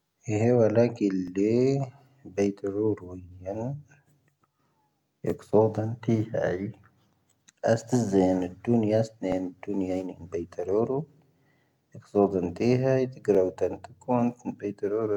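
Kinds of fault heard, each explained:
Overlapping chunks: the speech was processed in 2 s chunks, each starting 12 ms before the previous one ended, so that 12 ms replays at every join as a regular click. A spectrogram shows thin vertical broadband lines about every two seconds, and the waveform shows abrupt steps with briefly repeated cycles.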